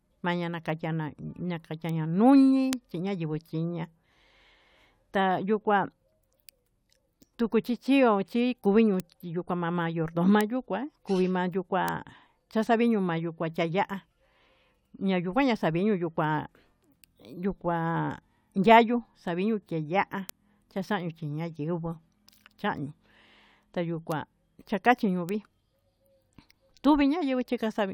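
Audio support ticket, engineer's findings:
Bit error spikes: isolated sharp broadband ticks at 1.89, 2.73, 9.00, 10.41, 11.88, 20.29, 24.12 and 25.29 s, peaking at about −18 to −6 dBFS. Flipped bits on a digital link or in buffer memory.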